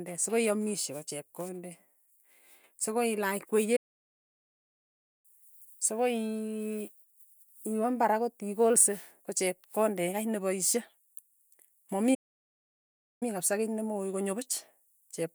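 A speech clip with two playback stalls: the voice cuts out mid-flow at 3.76 s and stays silent for about 1.5 s until 5.26 s, then drops out again at 12.14 s for about 1.1 s, coming back at 13.23 s. Both gaps are dead silence rather than noise, which points to the player likely running dry of buffered data or having its audio thread blocked, then picking up again once it caught up.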